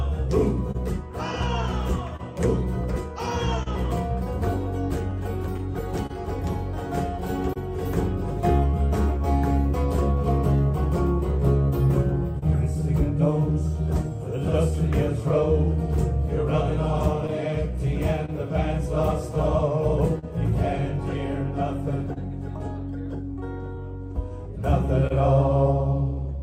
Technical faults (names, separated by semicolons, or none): clock drift between sender and receiver; scattered short gaps; repeated timing corrections; short stall from a late packet